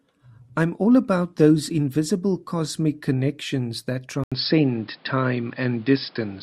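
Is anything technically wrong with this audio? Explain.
Yes. At 4.24 s, after a gap of 80 ms, the speech runs to the end with nothing above 5.3 kHz, a level shift of about 5 dB and a new noise floor roughly 35 dB down. The input likely switched to a poorer device. On a spectrogram the top band cuts off sharply. The waveform shows the brief flat gap and a change in amplitude.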